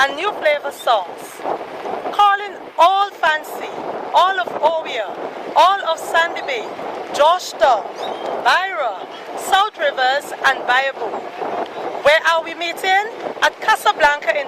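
No technical faults detected.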